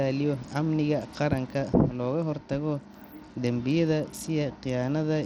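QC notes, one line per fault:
throughout: Bluetooth SBC compression, likely at a starved bit pool consistent with about 80 kbps. The speech's upper sub-bands get few bits, so treble flickers in and out under gritty quantisation noise. A spectrogram shows ragged, blocky upper bands switching on and off.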